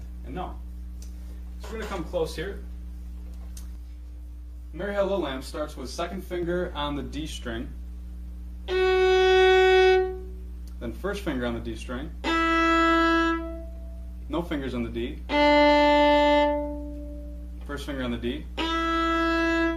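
From 3.75 to 6.43 s the audio turns rough and slightly doubled with channel delay (comb filtering): one channel lags by about 20 ms, so summing to mono cancels shared content at evenly spaced frequencies from near 30 Hz upward. A spectrogram shows fixed, regularly spaced dark horizontal notch bands.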